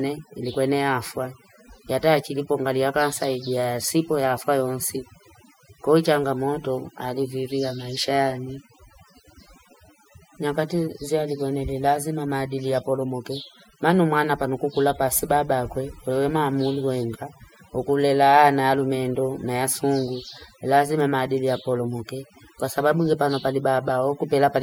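Speech carrying overdone noise removal throughout: the background drops and breaks up into twinkling specks, and quiet voice detail vanishes, unlike plain low-pass dullness.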